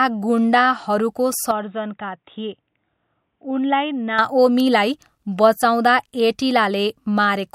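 At 1.51 s the speech abruptly turns dull and boxy, about 5 dB quieter, with a faint new noise floor roughly 50 dB below the signal. It snaps back to full clarity at 4.19 s with no gap at either edge. The likely cause is an input switched to a poorer device. On a spectrogram, everything above 3.8 kHz vanishes across that stretch, leaving a hard ceiling. The waveform shows a slightly lower envelope between the two switch points.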